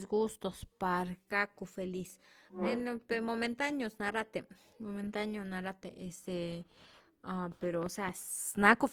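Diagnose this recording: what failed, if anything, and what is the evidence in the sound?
Codec stage: speech is grainy and rough throughout, not swirly like MP3, with bandwidth intact to about 20.2 kHz; likely Opus compression noise-filling bands at a low bitrate.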